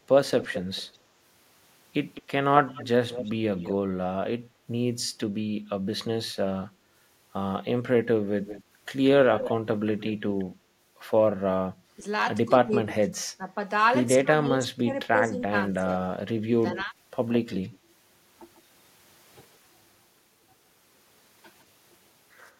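From 0.4 to 0.94 s, a delayed copy of the speech trails the talker by 208 ms. This is an echo leak. The likely cause is a far-end echo canceller that failed to strip out what its loudspeaker fed back into its microphone. The copy sits around 10 dB below the speech. It returns from 2.14 to 3.73 s at the same 208 ms delay, fainter at about 15 dB down. It comes back from 8.44 to 10.44 s with a 181 ms delay at about 10 dB down. From 16.41 to 18.61 s the delay shortens to 151 ms. This last copy is faint, around 20 dB down.

Between 12.47 and 16.94 s, the speech is suppressed in double talk. The speech dips and breaks up in pieces while the other side is talking. Some drops reach about 20 dB, and the losses add up to around two seconds. The likely cause is an echo canceller that could not tell the talker from the loudspeaker echo, so it turned both down.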